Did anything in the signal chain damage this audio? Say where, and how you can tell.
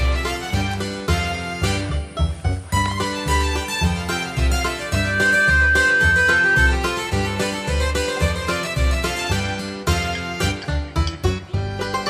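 Yes. A loudspeaker feedback squeal enters at the acoustic stage, before capture, where the microphone hears the loudspeaker it drives. From 4.81 s to 6.82 s a pure 1.6 kHz tone swells over roughly half a second and holds about 5 dB above the programme. At that one frequency the loop gain exceeds one, so the tone keeps feeding itself. A spectrogram shows a single bright horizontal line at 1.6 kHz, and the waveform's envelope bulges steadily across those two seconds.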